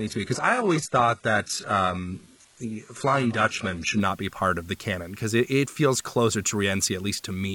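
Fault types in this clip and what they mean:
low bit depth with dither: The speech sounds like it's carried on only about 8 bits, with dither smoothing the rounding, so rather than gritty distortion you get a steady, even hiss throughout, sitting roughly 30 dB below the speech.
adaptive stream starting at a low bitrate: For the first 4.0 s, up to "not be part of", it's dull and smeary, with nothing above 11.5 kHz, consistent with a roughly 12 kbit/s HE-AAC opening. Then it jumps cleanly, no gap, to what sounds like 96 kbit/s AAC-LC.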